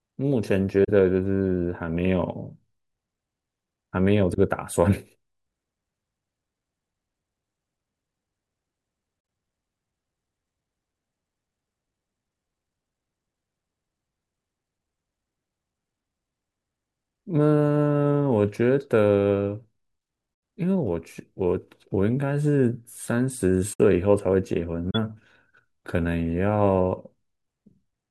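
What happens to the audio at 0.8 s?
At 0.84 to 0.89 s there is a concealed corrupt frame: a brief, soft-edged dip where the sound thins and smears for about 54 ms rather than clicking or squeaking. The duration fits two damaged AAC frames that the decoder detected and papered over with muted or scrambled substitute content, so timing stays intact. A waveform shows a short sag in amplitude with gentle edges. A spectrogram shows a narrow vertical band of weakened, blurred energy instead of a sharp broadband line.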